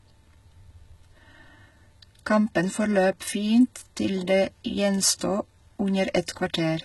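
Throughout the speech the treble sounds gritty and metallic, with nothing above 11.8 kHz. This is likely HE-AAC compression rebuilding the top band, and the heavy damage points to a bitrate near 16 kbps. At 5.19 s and 6.26 s, a brief hiss of 19 ms and then 16 ms smears ahead of sharp attacks. This is pre-echo, where the codec's block-wide noise leaks into the quiet moment just before each onset.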